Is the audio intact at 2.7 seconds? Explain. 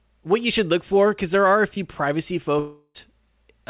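No. From 2.59 to 2.96 s there is a likely long network dropout: about 0.36 s of audio never arrived, so the receiver stretched the last sound into a fading buzz. A spectrogram shows smeared, repeating bands dimming out, and the waveform a looping, decaying envelope.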